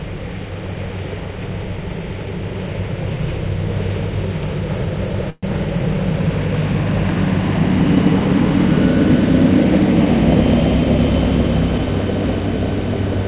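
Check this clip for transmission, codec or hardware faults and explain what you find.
One transmission fault stands out in this recording of everyday sounds: a brief call audio freeze at 5.3 s, running to about 5.45 s. The whole clip is band-limited with nothing above 4 kHz, consistent with a G.711 telephone codec.

From 5.3 s the last sound is stretched into a fading buzz or hiss for about 126 ms, followed by roughly 20 ms of silence before the audio resumes exactly where it stopped. This is likely caused by packets arriving late and the jitter buffer running dry, so the receiver invented filler instead of dropping anything. Nothing is lost, but everything after it plays 126 ms later. On a spectrogram the filler appears as smeared, repeating horizontal bands that decay into a thin dark gap. On the waveform it shows as a shrinking envelope ending in a short flat line.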